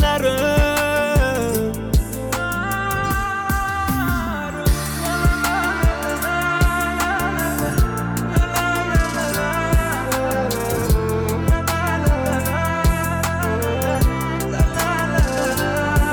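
No technical faults can be heard anywhere here.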